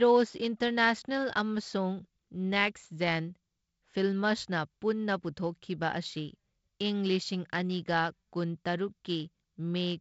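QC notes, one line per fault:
No fault to note in this speech clip.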